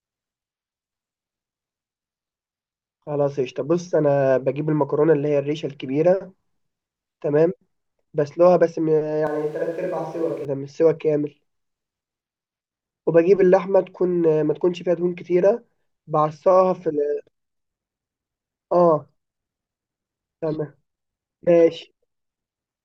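The clip is speech. From 9.27 to 10.45 s the sound turns suddenly roomy and hollow. It loses bass and drops about 5 dB. Background noise rises to roughly 30 dB below the speech. Then it snaps back. This is likely a switch to a distant microphone, replacing the close one.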